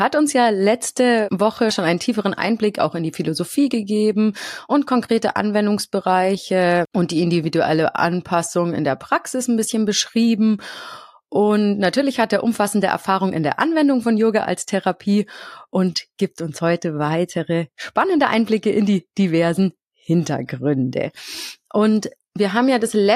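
No technical faults are audible.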